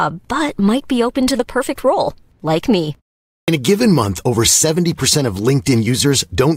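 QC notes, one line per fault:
3.41–3.48 s, clipped start after a pause: after "perfect role like me" and a pause of roughly half a second, the speech resumes abruptly, with about 70 ms of its onset swallowed, so the first sounds of the phrase leading into "a given month over" are missing and it snaps in out of silence. The output device had gone idle during the gap and was still waking or relocking when speech returned, so that opening stretch never reached the output.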